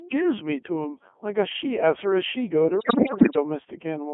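Throughout, the speech carries Codec 2 vocoder damage, consistent with a 3.2 kbit/s stream: a resynthesised, buzzy, robotic voice confined to roughly 250 Hz to 3.4 kHz, with the original waveform lost.

From 2.79 to 3.36 s, bit errors on digital voice radio, at around 7 percent, corrupt the frame parameters, so pitch, level and timbre jump erratically into warbling gibberish across what sounds like a few dozen frames.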